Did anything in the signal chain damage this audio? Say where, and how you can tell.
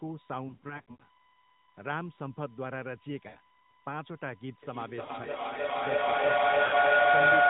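Yes. A steady 1 kHz whine sits under the whole clip, about 25 dB below the speech. It points to USB whine in the analogue wiring: the bus's 1 ms frame activity is leaking into the audio through shared power or ground.

The speech drops out or warbles briefly at 0.48–1.04 s (about 280 ms lost across 520 ms, longest gap 80 ms), 3.28–3.37 s, 5.06–5.11 s and 6.66–6.74 s. These are lost AMR speech frames on the network: the decoder stretches the last good frame with fading gain.

From 4.63 s to the end, every phrase returns roughly every 0.3 s. The repeats pile up instead of dying away, reaching about 14 dB above the direct speech. This is feedback echo between two devices: one device's microphone recaptures another's playback, which neither echo canceller removes.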